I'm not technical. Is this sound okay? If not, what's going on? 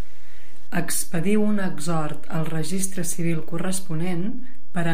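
No. The recording carries a DC offset: the whole waveform sits shifted away from its centre line by a fixed amount for the entire speech clip. You can't hear that shift itself, but it wastes loudness room, so peaks distort sooner if the level is raised.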